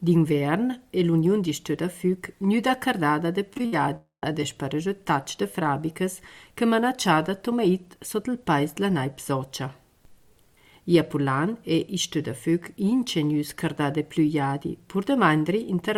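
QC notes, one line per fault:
3.53–3.74 s, repeated packet loss (robotic sound): four short gaps, the longest 60 ms and 120 ms in all, were each patched by extending the preceding sound. About half of this span is concealment, so it turns choppy and robotic, with small pieces missing.
3.96–4.24 s, long network dropout: about 260 ms of audio is missing, likely because nothing arrived over the network. The last sound is stretched into a fading buzz, followed by roughly 110 ms of silence before the audio resumes without the lost part.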